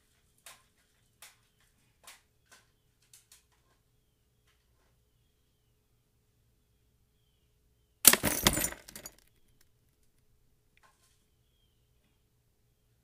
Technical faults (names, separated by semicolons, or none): none